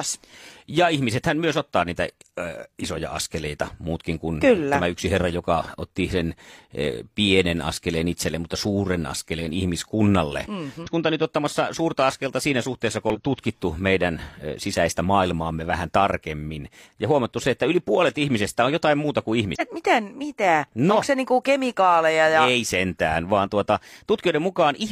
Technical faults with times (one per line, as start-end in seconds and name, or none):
10.82-10.89 damaged data in a compressed stream
13.10-13.16 damaged data in a compressed stream
19.55-19.61 damaged data in a compressed stream